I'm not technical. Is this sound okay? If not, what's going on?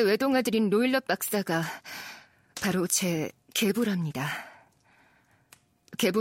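Yes, it's fine: I can't hear anything wrong anywhere in this recording of someone talking.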